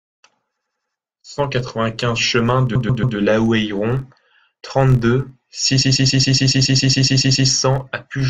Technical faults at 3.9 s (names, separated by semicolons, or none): filter restarted on every block